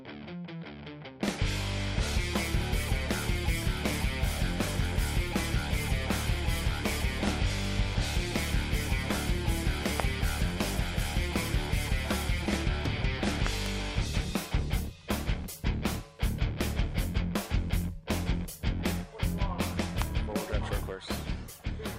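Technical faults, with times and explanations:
10.00–10.02 s, 13.47–13.68 s, 20.02–20.04 s: loud pop. A sharp pop at 10.00 s, a double pop at 13.47 s and another single pop at 20.02 s reach about 20 dB above the audio, which continues underneath. The cause is likely a voltage step or pulse, such as from a switch, static or a driver glitch.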